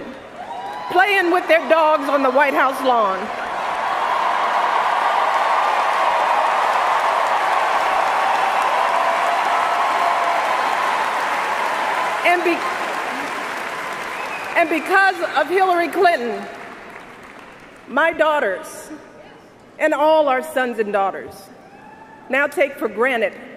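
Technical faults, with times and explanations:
No technical faults can be heard anywhere in the clip.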